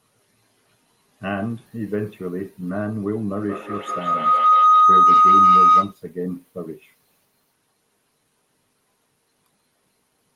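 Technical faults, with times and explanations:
3.39–6.03 s, feedback howl: a tone near 1.5 kHz builds until it is about 12 dB above the speech, with the loop repeating about every 200 ms. Two devices sharing one room keep re-amplifying each other's output, and each pass through the loop adds level at that frequency.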